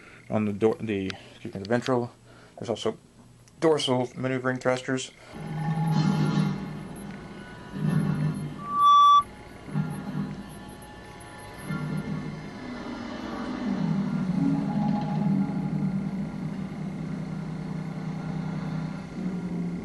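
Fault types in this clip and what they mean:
Loudspeaker feedback squeal: the microphone-speaker loop self-oscillates at 1.2 kHz, swelling quickly to about 15 dB above the sound, a bright horizontal spectrogram line.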